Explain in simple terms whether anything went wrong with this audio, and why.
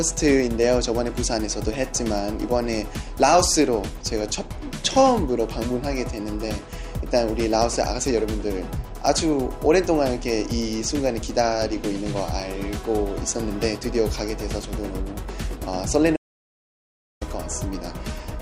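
Around 16.17 s there's an audio dropout to silence: the sound cuts to dead quiet until 17.21 s, likely from the input briefly disconnecting or muting.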